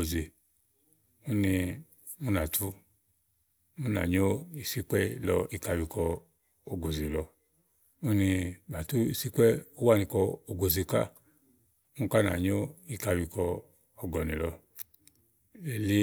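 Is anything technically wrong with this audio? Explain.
No, nothing is technically wrong.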